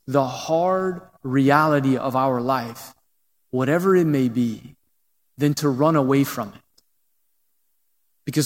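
From 0.11 s to 8.45 s, clock slip clicks form a soft rattle about every 20 ms, likely two unlocked clocks drifting roughly 0.1% apart.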